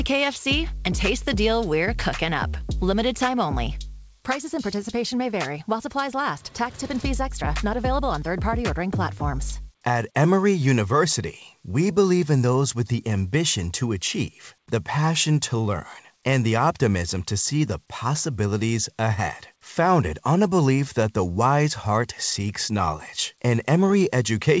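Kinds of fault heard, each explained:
No faults heard: the audio came over a call link with nothing above 8 kHz, which fits a wideband codec such as G.722 at 64 kbps.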